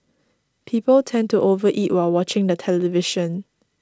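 No technical faults are audible.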